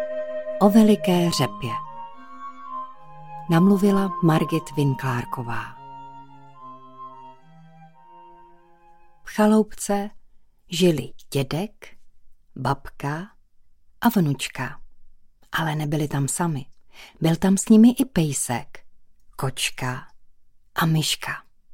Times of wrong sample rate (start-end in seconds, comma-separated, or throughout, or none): none